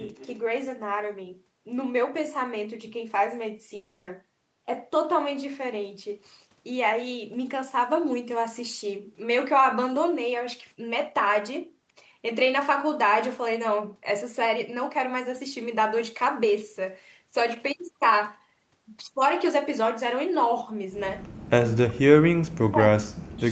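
Speech over a call link, carrying three kinds of fault. From 0.16 to 0.29 s a faint delayed copy of the voice trails the talker by about 263 ms, sitting roughly 25 dB below the speech. That is an echo leak: the far end is likely on a loudspeaker, and its echo canceller let part of what its microphone picked up travel back down the line. Between 3.75 and 4.09 s there is a long network dropout. For about 0.32 s the stream is replaced by a concealment fill, a decaying buzz-like continuation of the last sound rather than clean silence. Speech resumes after the gap, and the audio that belonged in that stretch is missing, which points to packets that likely never arrived. Near the end, from 21.79 to 22.06 s and again from 22.33 to 23.43 s, the talker's level collapses, falling by as much as roughly 40 dB at its deepest, so the voice dips and breaks up in pieces. This is speech suppressed in double talk. 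With both sides likely speaking at once, the echo canceller could not separate the local voice from the loudspeaker echo, so it attenuated everything. Throughout, the band stops at 8 kHz, consistent with a wideband call codec.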